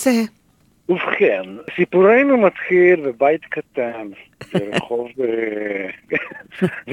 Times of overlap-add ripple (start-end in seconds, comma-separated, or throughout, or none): 5.02-6.92